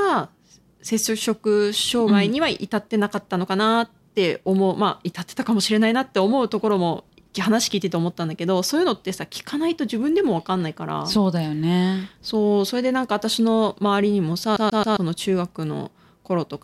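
At 14.57 to 14.97 s the speech stutters, one 134 ms slice repeating three times with brief mutes: a CD stuck on one turn, the laser jumping back each revolution.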